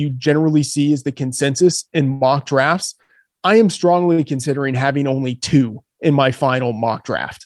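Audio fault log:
2.13–2.23 s, 3.02–3.11 s and 4.13–4.20 s: short stall from a late packet. Three times the next packet arrived late, the jitter buffer emptied, and the receiver held the last sound for about 74, 67 and 54 ms, after "is the consensus in", just before "I am", and before "considering having only two". Playback then resumed where it stopped, so no sound is lost, but each held sound drags with a faint buzz or dip and the clip falls progressively later.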